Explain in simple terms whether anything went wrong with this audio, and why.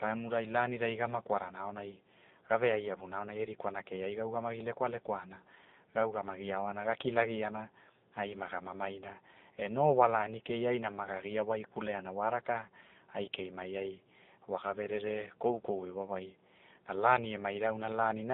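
Yes, two things went wrong. Throughout, the speech has passed through the AMR narrowband mobile codec, the compression used on older mobile calls. Everything above about 3.7 kHz is gone, and the voice sounds buzzy and synthetic. That synthetic edge is what separates it from simply muffled audio.

Between 15.50 and 15.57 s, just after "ai wa ga verere" and before "iwawai na lani", AMR bit errors hit. Corrupted data made the voice briefly hoarse and gargly. Unlike a dropout, there is no silence, and the pitch and loudness carry on.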